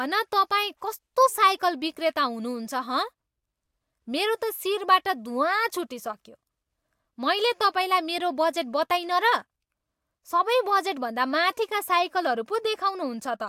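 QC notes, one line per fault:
No faults found in this speech clip. Nothing needs logging for it.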